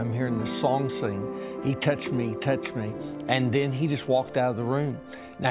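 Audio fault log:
No faults in this audio.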